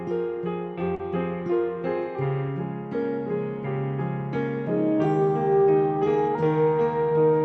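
At 0.95 s the music has a short concealed packet loss lasting until about 1.01 s. Roughly 40 ms of audio never arrived in time, so the receiver extrapolated the preceding sound to bridge the gap and then crossfaded back into the real signal. It registers as a brief smear and wobble in the music. The clip has passed through an Opus call path, and its content stops at about 8 kHz, consistent with a 32 kbps setting.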